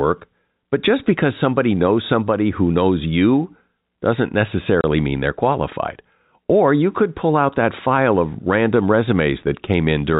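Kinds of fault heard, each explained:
Packet loss filled with silence, 4.81 to 4.84 s: for 30 ms the speech drops to dead silence because the receiver had nothing to play for that stretch and inserted zeros instead of concealing the gap. The hole starts and ends abruptly. Its length fits three consecutive 10 ms packets going missing, heard within the narrow telephone band of the G.711 coding.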